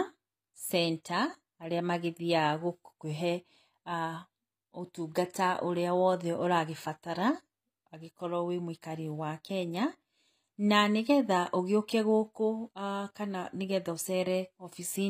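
All the way through, the treble sounds rebuilt rather than captured, likely HE-AAC compression at a low bitrate, something like 24 kbps. The top end is copied up from lower bands, so s sounds come out gritty and metallic, and there's nothing above 15.4 kHz.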